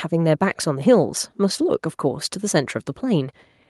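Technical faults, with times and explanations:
No technical faults are heard in this speech clip.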